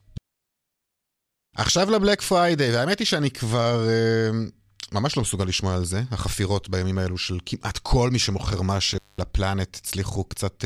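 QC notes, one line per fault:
8.92–9.25 s, intermittent contact: a loose plug or cable connection in the signal path briefly lost contact, so the line went open for about 203 ms inside this span. The speech cuts out abruptly, with crackle at each edge as the contact scrapes open and then makes again. While the circuit is broken, only faint hiss is left in place of the signal, and the speech resumes once the connection closes.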